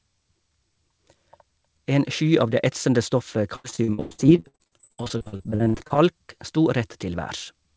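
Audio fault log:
3.56–6.00 s, repeated packet loss (robotic sound): just after "av det etsende stoffet" the speech breaks into dozens of short dropouts, the longest 104 ms. Each hole is patched by extending the preceding sound, so nearly half this stretch is synthetic fill, heard as choppy, robotic speech.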